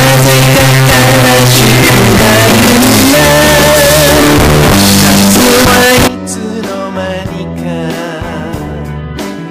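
From the start to 6.08 s the audio is extremely loud and harsh, with background noise pushed up to the same level as the main sound, though its pitch contour can still be followed. The likely cause is float read as integer: 32-bit float samples interpreted as 32-bit integers, so the sign and exponent bits dictate each value. The waveform looks like a near-square block at an almost fixed, high level, and the spectrogram shows dense broadband energy throughout.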